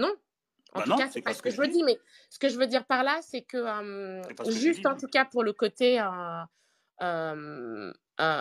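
No technical faults can be heard anywhere in this speech recording, and the signal stays stable and continuous throughout.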